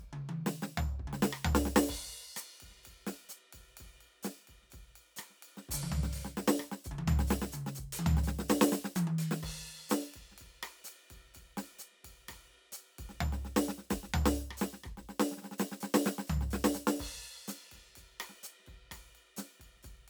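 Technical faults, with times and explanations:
Nothing technical stands out here; the music runs along without a single glitch worth flagging.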